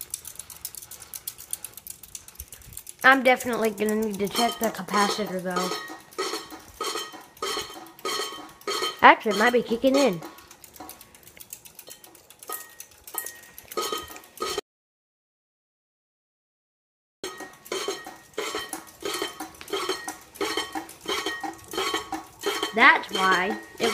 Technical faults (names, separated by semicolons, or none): audio dropout to silence